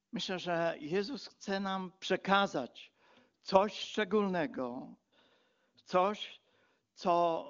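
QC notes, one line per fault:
The speech sits within the AMR wideband (HD Voice) band with nothing above about 7.3 kHz, and at the 23.85 kbit/s rate it points to, any coding damage is faint at most.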